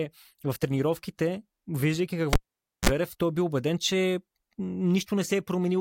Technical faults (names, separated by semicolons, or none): cable pulled and plugged in